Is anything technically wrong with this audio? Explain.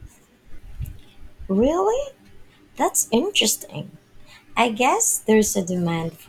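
Yes. From 1.39 s to about 6.1 s the speech carries clock drift buffer slips, recurring every 1.57 s, about four in all. Two devices are likely running on separate clocks that disagree by several hundred parts per million, so the buffer between them steadily creeps toward full or empty until a few dozen samples are dropped or repeated to catch up. Each slip sounds like a click or pop in the speech at that steady interval.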